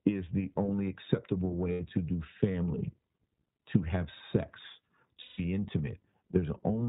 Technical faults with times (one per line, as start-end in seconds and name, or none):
0.00-6.88 iLBC codec
1.72-1.81 lost iLBC frames
5.22-5.40 lost iLBC frames